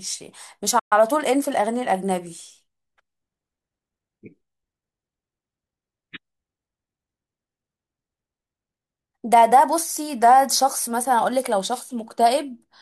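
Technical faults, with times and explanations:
0.79 to 0.93 s, playback stall: the speech halts abruptly and a 120 ms hole of silence opens before it resumes. The likely cause is the player running dry of buffered data or its output thread being held up, so nothing reaches the output until it recovers. On a waveform this is a flat line cut cleanly out of active speech. A spectrogram shows a vertical dark band with sharp edges on both sides.
0.93 to 1.73 s, time-compressed catch-up: straight after the gap, the speech runs hurried at 1.15 times normal speed for about 0.8 s while the pitch stays where it was. The player is clearing the backlog from the stall by dropping small slices of audio and cross-fading across the joins. A spectrogram shows harmonics at unchanged height but syllables squeezed closer together, with slight smearing at the splice points.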